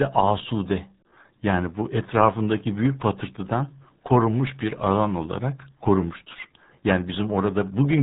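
From start to finish the speech carries the signature of the RealAudio 14.4 codec, the early RealAudio 1 format built for dial-up modems. The band stops hard at about 3.8 kHz, so consonants lose their edge and the voice sounds boxed in and muffled. The codec damage is heavy: the speech takes on a gargling, watery texture as the coder rebuilds the signal from very few bits, which fits an 8 kbit/s stream.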